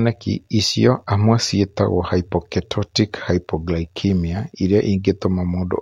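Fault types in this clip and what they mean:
No technical faults detected.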